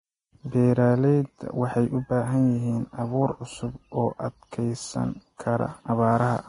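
Hissy, grainy treble with roughened tones and smeared consonant attacks runs throughout, with nothing above 10.6 kHz; likely heavy Vorbis compression, fitting a bitrate near 28 kbps.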